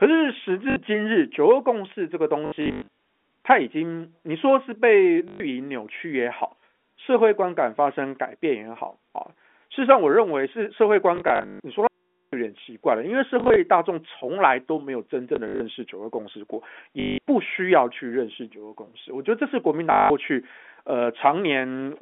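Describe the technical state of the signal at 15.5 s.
At 15.5 s the sound stutters robotically, with a brief buzz near 50 Hz. This is packet loss with the last packet repeated, from 15.36 to 15.6 s: about 120 ms went missing across 240 ms, in runs up to 60 ms, which fits 20 ms packets, and the receiver looped the previous packet through each gap.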